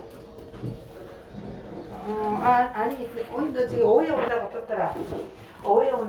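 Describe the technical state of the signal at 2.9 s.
At 2.9 s the signal is intact, with no audible fault.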